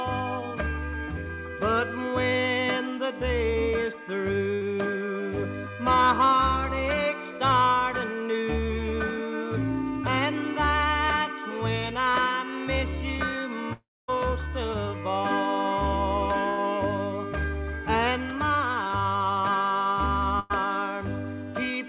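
Audio carried over a call path whose band stops at 4 kHz, consistent with G.711 A-law at 64 kbps, shows three bursts of packet loss at 4.54 to 4.63 s, 16.50 to 16.59 s and 20.39 to 20.52 s. Each time, the receiver stretches the last sound into a fading buzz or hiss for 68 to 103 ms, seen as smeared, repeating spectrogram bands before the audio resumes further on. From 13.73 to 14.10 s, a likely long network dropout leaves 360 ms missing: a decaying continuation gives way to about 260 ms of near-silence, a flat, empty stretch on the waveform. At 18.87 to 18.91 s, short concealed packet loss causes a brief 20 ms smear or wobble, a tiny blurred patch where a short sound can vanish.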